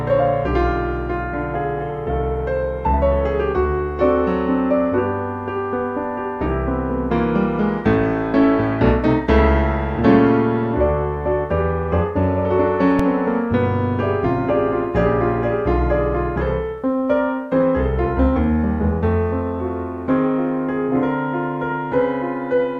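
At 12.99 s an underrun with held sample flattens the waveform for 2.7 ms, fitting a 128-sample buffer, as the converter holds its last value until data returns.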